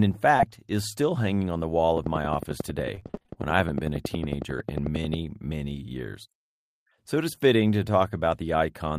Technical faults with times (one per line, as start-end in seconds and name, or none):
1.97-5.15 train of clicks
2.95-3.38 repeated packet loss (robotic sound)